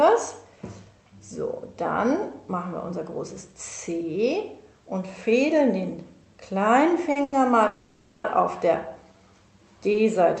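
At 7.11 to 7.17 s and 7.23 to 7.34 s come two short stalls from a late packet, 40 ms and 90 ms long. The jitter buffer ran empty, so the last sound is held with a faint buzz or dip. On a spectrogram this shows as flat, smeared horizontal bands where the detail stops changing.

From 7.67 to 8.26 s there is a call audio freeze. The sound is stretched into a fading buzz or hiss for 570 ms, likely because packets were held up in transit. On the waveform this appears as a decaying, repetitive stretch before normal detail resumes.

At 9.92 to 9.96 s a final 20 ms stall briefly holds the sound again. Each of these inserts delay rather than removing audio.

The call path itself, which points to Opus with its top limit at 8 kHz, leaves the spectrogram empty above 8 kHz.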